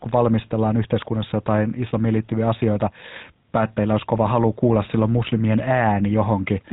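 From start to finish the speech carries the sound of the GSM full-rate codec, and the damage is plainly audible. The codec rebuilds the voice from a vocal-tract filter driven by a coarse, regularly spaced pulse excitation, so fine detail in the excitation is lost and the speech takes on a buzzy, gravelly roughness. Nothing survives above 3.8 kHz, leaving a dull, narrowband top. The overall quality fits a 13 kbps encode.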